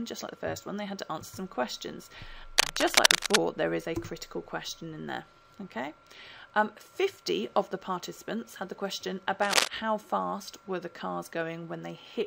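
From 2.58 to 3.37 s, and again from 9.42 to 9.68 s, a dense, uneven rustling scratches over the sound: cable scratch noise, likely from a worn cable or connector whose contact resistance jumped about as it moved. The first burst sits roughly 10 dB above the signal, the second nearer 5 dB. A spectrogram shows ragged broadband vertical streaks, and the waveform shows spiky, irregular clusters riding on the audio.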